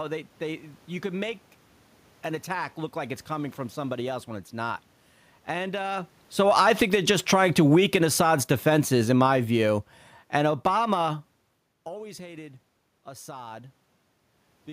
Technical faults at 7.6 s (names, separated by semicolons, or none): automatic gain falling